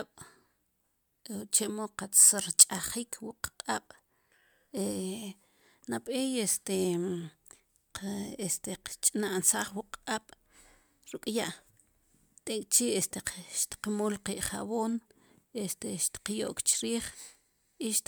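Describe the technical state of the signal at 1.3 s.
Nothing is wrong with the signal at 1.3 s: the speech is intact there, with no dropout, clipping, glitch or other technical fault.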